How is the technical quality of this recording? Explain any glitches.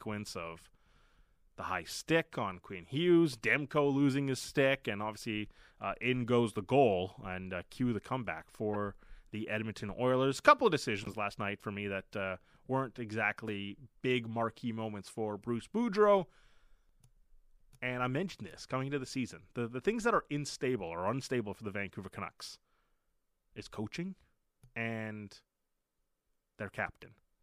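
Two short glitches break into the speech, both from a corrupt frame decoded. At 8.73 to 8.76 s, right after "uh cue the comeback", a glitch peaks around -25 dBFS across about two frames. At 11.03 to 11.14 s, between "couple of" and "last night for me", a longer glitch peaks around -30 dBFS across roughly four frames. Flipped bits in each compressed frame gave the decoder wrong gains or codes. It placed energy at the wrong frequencies, so each glitch sounds like a chirp, squeak, blip or burst of noise.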